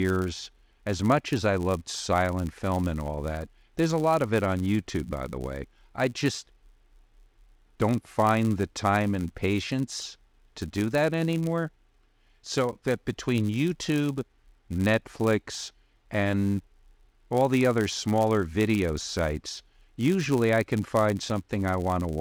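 Speech, and the whole thing carries a 100 Hz buzz that rises and falls with the talker's level. That's a filter restarted on every block: its state resets each time, so every block opens with a tiny tick, which points to blocks about 10 ms long.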